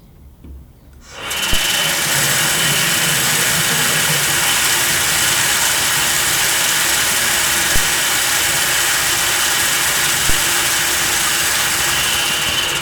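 At 1.53 s, 7.76 s and 10.30 s, a DC step occurs. The waveform's zero line suddenly jumps, by about -7 dBFS, then about -6 dBFS at the last. Each offset then decays away through a 5 Hz high-pass. Each step is a brief low thump under the unchanged sound.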